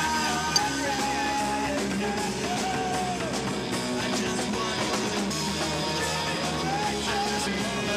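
Damaged data in a compressed stream occurs at 0.56 to 0.58 s, then at 2.90, 5.30 and 7.46 s. Each time, the decoder misreads corrupted frames and loses sync while hunting the next header. This leaves a brief disturbance, seen as a narrow vertical break in the waveform and spectrogram.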